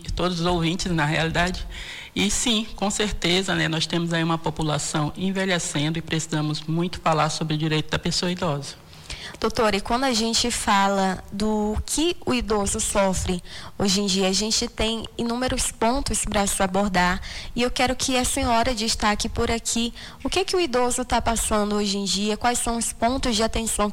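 From 14.67 s to 16.70 s a train of clicks ticks over the sound: about ten near-identical pulses at a regular 5 per second, peaking at about the signal's own level. The likely cause is interference from nearby equipment or a faulty connection or power supply.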